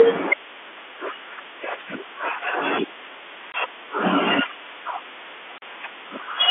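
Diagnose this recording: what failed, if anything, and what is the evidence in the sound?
Network stage: packet loss filled with silence. Hard-edged dropouts at 3.52–3.54 s and 5.58–5.62 s, 20 and 40 ms, which fits one and two lost 20 ms packets over this G.711 telephone call.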